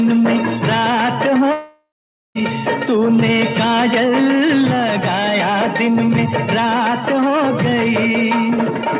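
From 1.52 to 2.38 s the sound freezes into a fading buzz or hiss, then about 490 ms of silence, and resumes with about 840 ms lost, likely a long network dropout. Unlike a brief concealed packet loss, the fill decays into silence and the audio resumes without the lost part. Throughout, nothing above 4 kHz comes through, consistent with a G.711 call path.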